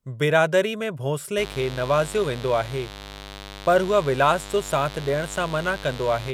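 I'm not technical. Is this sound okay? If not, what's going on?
No. From 1.36 s, right after "बिरादरी में", a steady raspy mains buzz at 50 Hz joins the speech, picked up from the electrical supply, and runs to the end.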